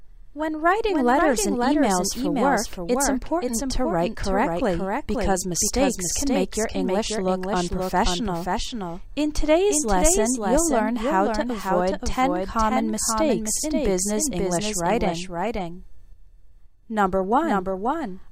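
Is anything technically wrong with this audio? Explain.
Yes. A doubled audio track runs throughout: a second, full-band copy trails about half a second behind, roughly 5 dB quieter, with no decay. It likely comes from a second, slower capture path. It sounds like a dry slap-back, and on a waveform or spectrogram every event reappears as a fainter twin about half a second later.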